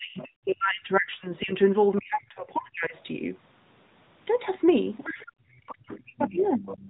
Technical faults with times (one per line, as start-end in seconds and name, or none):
0.00-6.89 AMR narrowband mobile codec
0.00-1.53 speech suppressed in double talk
0.18-0.25 other side's voice leaking through
1.36-1.42 other side's voice leaking through
2.96-3.03 other side's voice leaking through
5.05-6.64 speech suppressed in double talk
5.69-6.89 other side's voice leaking through